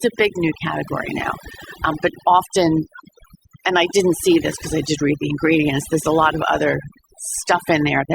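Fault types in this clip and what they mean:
overdone noise removal: noise reduction pushed far too hard, muting narrow frequency bands near the noise estimate and taking soft speech detail with them. Throughout, the background drops and breaks up into twinkling specks. A spectrogram shows scattered isolated dots between dark gaps.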